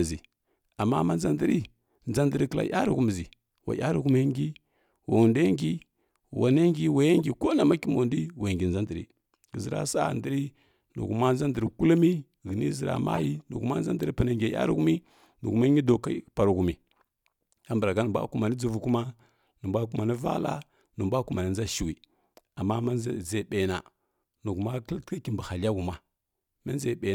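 Damaged compressed frames were played by the decoder anyway, a corrupt frame decoded fault in this speech clip: brief chirpy noise bursts, peaking around -20 dBFS, at 7.19–7.24 s, 11.66–11.73 s and 13.13–13.25 s, just before "nihuma nʒa ndri pana", each spanning a handful of frames.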